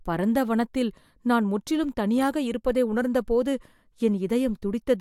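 Nothing in this bit of speech comes across as a technical fault, so there's really nothing to flag here.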